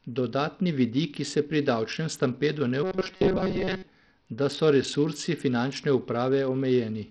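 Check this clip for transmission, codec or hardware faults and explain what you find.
Two faults are audible in this speech clip. Throughout, the treble flickers and drops out under gritty noise, likely from heavy Bluetooth SBC compression starving the top sub-bands, which fits a bitrate around 64 kbps. A spectrogram shows a ragged, blinking upper band. From 2.83 to 3.87 s, robotic sound from repeated short buffers appears: likely about 5.3 ms chunks repeat, discarding most of the real audio and imposing a rigid 188 Hz metallic buzz. The spectrogram shows evenly spaced harmonic stripes, and the waveform shows identical repeating cycles.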